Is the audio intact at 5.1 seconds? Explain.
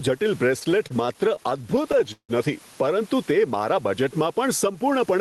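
No. At 5.1 s the jitter buffer speed-up running from 4.67 to 5.16 s is active: the receiver trims short pitch-period chunks, about 40 ms in all, to shed excess delay. The speech runs about 8% fast at unchanged pitch, and the spectrogram shows harmonics at the same frequencies over a compressed time axis.

Gain pumping also affects this moment. Likely an overly hot microphone gain hitting a fast limiter, it swings the level by around 10 dB. The waveform envelope looks flattened, with the noise floor rising between loud bursts and ducking under them.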